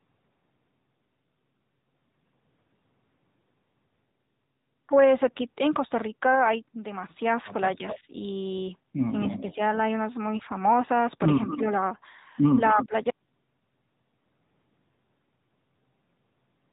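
A speech recording carries the AMR narrowband mobile codec throughout, with plainly audible damage. The voice sounds buzzy and synthetic, which fits a mid-rate mode around 10.2 kbps. On a spectrogram everything stops at a hard ceiling of 4 kHz, and the harmonics look smeared and grainy because the codec rebuilds each 20 ms frame from a vocal-tract model and a few excitation pulses rather than the original waveform. An echo leak appears at 7.89–7.99 s, 9.24–9.54 s, 11.48–11.57 s and 12.66–12.87 s as a delayed copy of the voice trailing by 249 ms. It is about 15 dB below the speech at first, about 20 dB below at 9.24 s, and only about 10 dB below in the last two. The likely cause is a far end on speakerphone whose echo canceller let part of its microphone pickup return. On a spectrogram it shows as a shifted, weaker ghost of the preceding syllable pattern. Speech suppressed in double talk overlaps these moments, at 7.76–8.06 s and 9.26–9.59 s with dips of about 5 dB, and at 12.74–12.93 s with a deeper dip of about 15 dB. 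It affects roughly a tenth to a sixth of a second each time. The likely cause is an echo canceller that could not tell the talker from the returning echo and attenuated both. On a waveform the envelope sags in short notches, and the spectrogram thins. Lost AMR speech frames occur once, a single 20 ms frame at 10.38–10.43 s. The decoder repeated the last good pitch and filter settings at reduced gain, so a brief warbly dip is heard. It shows as a short smeared, flattened patch in the spectrogram and a small amplitude hollow in the waveform.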